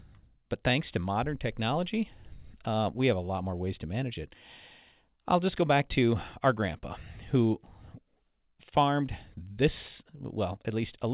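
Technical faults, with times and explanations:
Throughout: clock drift between sender and receiver. The speech has a faintly unsteady pace, with small hiccups at irregular spacing. The sender's clock runs about 4 percent fast, so the receiver's jitter buffer keeps overfilling and has to shed audio to avoid falling behind.
0.08 s to 11.07 s: repeated timing corrections. The delivery sounds slightly hurried, with tiny skips scattered unevenly across the whole stretch. The receiver keeps trimming short slices to keep pace, always in the same direction, so playback runs at 104 percent speed.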